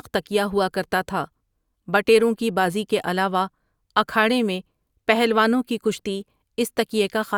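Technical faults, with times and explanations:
No technical faults can be heard anywhere in the speech. There is nothing to list with a time or an explanation.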